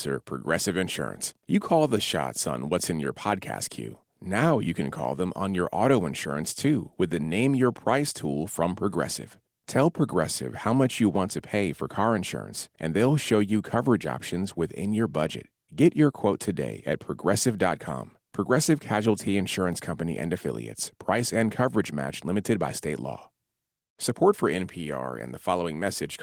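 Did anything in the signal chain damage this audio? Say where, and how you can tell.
No, nothing in the chain has damaged this speech: what can be heard points to Opus voice compression working in its hybrid mode with the full band kept, at a rate consistent with about 20 kbps, and the light coding texture it leaves is ordinary for that stage at such a rate.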